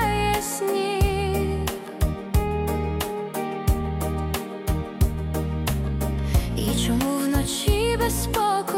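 No technical faults are audible.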